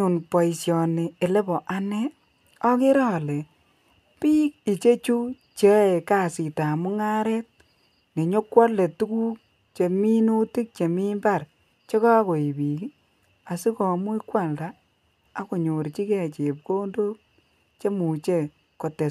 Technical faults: none

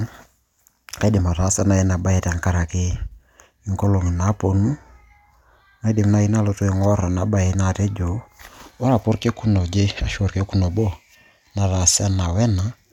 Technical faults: none

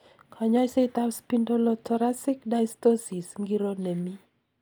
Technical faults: none

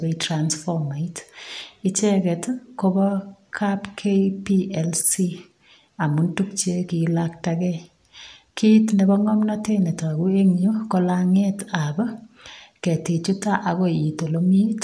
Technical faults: none

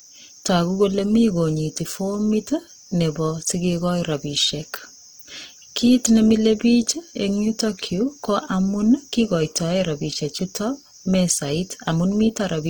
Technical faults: Opus compression

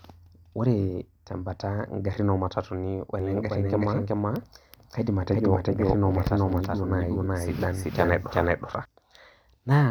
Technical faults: doubled audio track

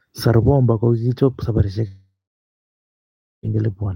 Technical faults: long network dropout

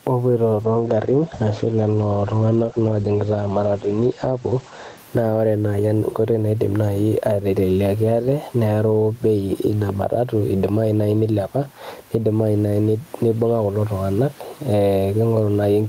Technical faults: gain pumping; call bitrate drop

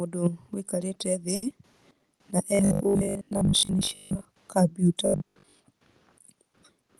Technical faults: short stall from a late packet; short concealed packet loss; robotic sound from repeated short buffers

